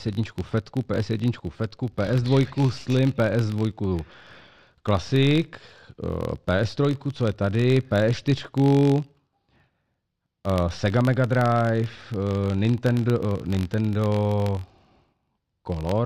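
A low buzz at about 46.9 Hz runs under the speech from start to finish, rising and falling with its level. This is a filter restarted on every block: it loses its state and starts from silence each time, which fits a 1024-sample block.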